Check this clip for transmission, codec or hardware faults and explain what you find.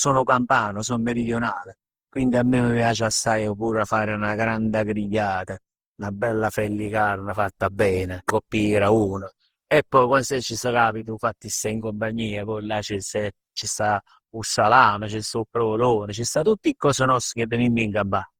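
One codec fault runs through the whole recording. Generation loss, present from start to finish, likely comes from the speech being encoded with Opus about seven times over. Each pass requantises on a shifted frame grid, so noise piles up. The result sounds swirly, smeared and hollow, beyond what a single pass at roughly 48 kbit/s would leave, with consonant attacks blurred and the top stopping near 20.2 kHz.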